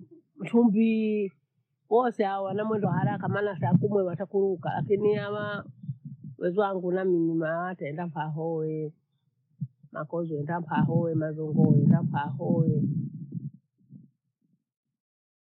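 Compressed frames skipped at 2.81–2.85 s, after "chumvii wose hawa wana", and at 10.82–10.89 s, after "makozi wenda mha": the decoder drops whole frames, so the speech lurches forward by a fraction of a syllable, roughly 20 ms and then about 50 ms.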